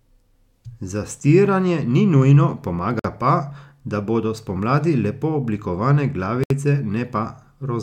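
A short silence cuts into the running speech at 2.99 s, right after "ni nujno", lasting about 50 ms, and again at 6.44 s, after "bodo spomladi lepo oblikovane", for about 68 ms. Each time the sound drops out with softened edges and then resumes exactly where it left off. This is a gap at a join of encoded pieces: separately encoded sections were butted together untrimmed, so the padded end of one run and the start-up delay of the next remain as dead air.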